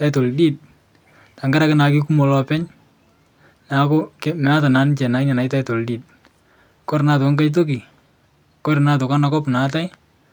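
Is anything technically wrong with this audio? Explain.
No technical faults are present.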